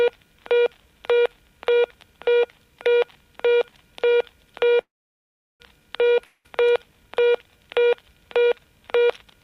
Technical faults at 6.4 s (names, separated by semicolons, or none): long network dropout